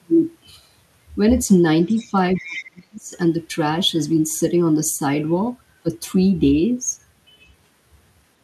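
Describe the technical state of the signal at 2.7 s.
At 2.7 s you're right at the tail of the other side's voice leaking through, from 2.36 to 2.7 s, a faint second voice roughly 15 dB under the talker, likely from a loudspeaker echo the canceller missed. Overlapping it is speech suppressed in double talk, from 2.37 to 3.12 s: the talker dips and chops, by as much as 35 dB or so, likely because the canceller ducked everything during the overlap.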